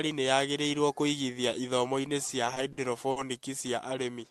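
From 2.27 to 3.18 s the speech stutters with repeated stalls: five short gaps, the longest 50 ms, where late packets emptied the jitter buffer and the receiver stretched the last sound to bridge them. Nothing is lost, but about 16% of that stretch drags.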